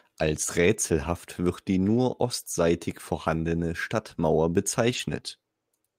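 Speech, with a lost packet rebuilt from error correction at 1.89–1.99 s, 3.57–3.59 s and 4.89–4.99 s. The decoder fills each gap with the lower-bitrate backup copy carried in the following packet, so the sound turns briefly rougher and noisier. Unlike plain loss concealment, there is no silence, buzzy repetition or fade, because these stretches are real, coarsely coded audio. The 20 ms event suggests one lost packet, and the others suggest three separate ones.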